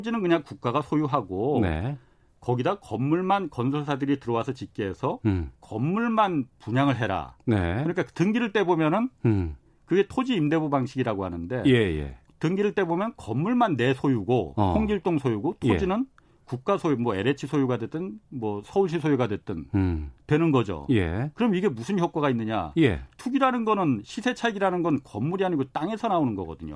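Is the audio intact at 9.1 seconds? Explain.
Yes, at 9.1 seconds the speech is intact, with no dropout, click, distortion or other fault at that moment.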